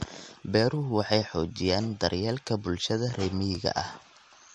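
Throughout the speech, nothing reaches above 15.7 kHz. Smeared, swirly artefacts from two different coders sit on top of each other. This is likely transcoding between lossy codecs: the sound points to MP3 at a low rate, then re-encoding to AAC, which kept the earlier damage.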